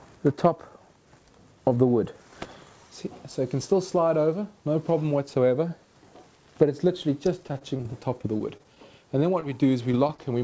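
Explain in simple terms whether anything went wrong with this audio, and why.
From about 7.48 to 8.78 s there's repeated packet loss, which gives a robotic sound. The connection kept dropping little chunks, eleven gaps in just over a second, none longer than about 22 ms. Each time, the receiver papered over it by stretching the last bit of sound, so it turns choppy.

Right after that come a few cases of short concealed packet loss, at 9.40–9.44, 9.92–9.95, 10.07–10.11 and 10.15–10.20 s. Each is a tiny missing slice, 20 to 40 ms, that the receiver filled in and then blended back into the real audio. You hear a quick smear or wobble, and a very short sound can just disappear. All of this came through a WebRTC call path using the G.722 codec, which is why nothing above 8 kHz comes through.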